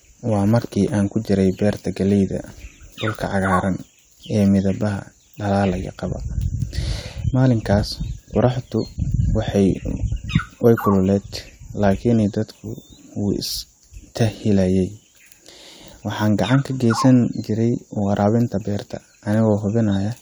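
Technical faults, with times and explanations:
No technical faults can be heard in this recording.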